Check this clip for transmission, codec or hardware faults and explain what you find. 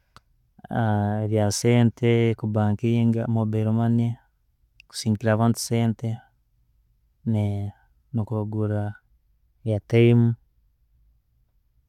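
Listening through this speech recording, nothing stood out as a transmission, codec or hardware problem.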